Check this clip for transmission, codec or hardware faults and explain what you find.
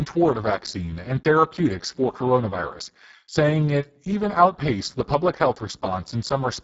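The whole clip carries one fault, Speex codec damage, and it is heavy from start to finish. Speex is a CELP coder. At a very low setting it has few bits to describe the excitation, so the speech comes out noisy and hoarse. The degree of coarseness fits a bitrate of about 6 kbps. Nothing is present above 7.6 kHz, which matches the codec's wideband limit.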